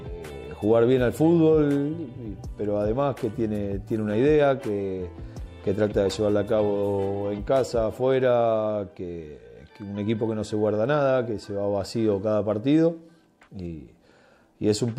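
Nothing stood out on listening; no technical problem could be heard anywhere in the audio.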